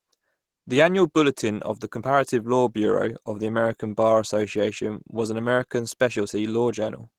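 Throughout the speech, the sound is plainly muffled and hoarse. This is likely Opus compression running in its hybrid speech mode at a starved bitrate, which fits roughly 16 kbps, leaving too few bits for clean detail.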